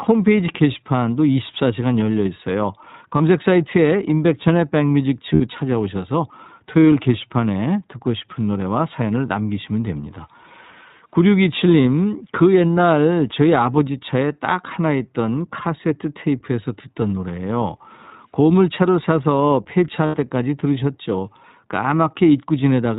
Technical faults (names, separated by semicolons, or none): iLBC codec; lost iLBC frames